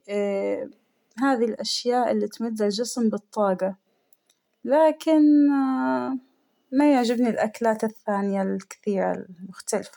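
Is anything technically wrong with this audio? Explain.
No, nothing technically wrong can be heard in this speech recording, as the signal stays intact and continuous throughout with no audible defects.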